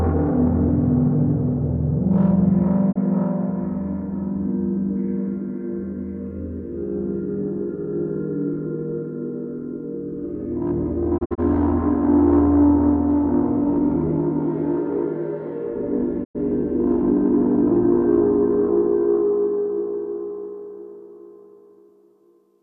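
Sounds with digital broadcast dropout. Lost or failed frames muted the receiver at 2.91 s, in short scattered holes from 11.17 to 11.40 s, and from 16.23 to 16.37 s.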